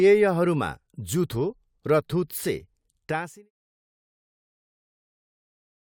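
Speech with no technical faults; the only level change is a deliberate smooth fade-out from around 3 s, ending at 3.51 s with no click or hard edge.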